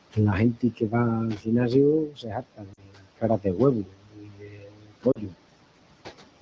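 Throughout the clip, noise suppressor artifacts cut the steady background by about 18 dB. The noise floor drops away between phrases and swells back under speech. On a spectrogram this shows as a speckled, flickering floor that pumps with the voice.

From 0.53 to 0.94 s, 1.34 to 1.48 s, 2.06 to 3.59 s and 3.83 to 5.34 s, there is speech cut by the noise suppressor. It mistook quieter parts of the speech for noise and pulled them down by up to about 16 to 19 dB, so consonants and word tails sound swallowed. Across these spans, roughly a fifth of a second, then a tenth or two, then about a second, then about one and a half seconds of speech is affected. Those stretches look hollowed out in the waveform.

At 2.73 s and again at 5.12 s, lost AMR speech frames cause a gap of about 40 ms each time, which fits two dropped 20 ms frames. The decoder stretches the last good sound with falling gain, giving a brief smeared dip. 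The spectrogram shows smeared harmonics fading out before the speech resumes roughly.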